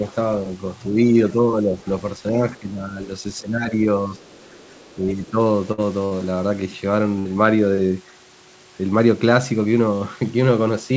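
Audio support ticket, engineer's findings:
Talker dips by about 5 to 10 dB at 1.34–1.79, 2.32–2.99, 3.42–3.72, 4.07–4.15 and 4.96–5.38 s: speech suppressed in double talk. Likely the AEC mistaking near-end speech for loudspeaker echo while both sides talked, and turning everything down.

Other side's voice leaking through at 4.19–4.95 s, faint, roughly 35 dB under the talker. Likely residual echo: the far-end voice from the loudspeaker got back into the mic and the canceller didn't fully strip it.

Burst of packet loss at 5.72, 6.05 and 7.19 s. Each runs about 60 ms of concealment, with the last sound held and fading, then a jump ahead that skips about 60 ms. Jitter buffer ran dry and the decoder extrapolated, and the G.722 band tops out at 8 kHz throughout.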